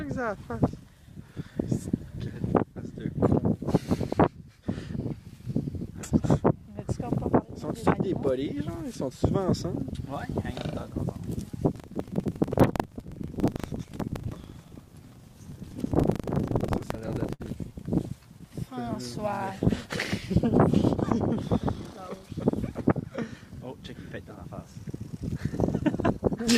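Buffer tearing runs from 11.68 to 17.53 s: writer and reader slipped, so each 40 ms period carries a small slice of audio about 150 ms old, giving a 25 Hz rattling buzz.

Repeated stalls (stutter) follow at 16.53–17.42 s and 17.98–18.52 s: late packets emptied the jitter buffer, and the held-over sound fills short gaps (longest 56 ms), making the audio drag and stutter.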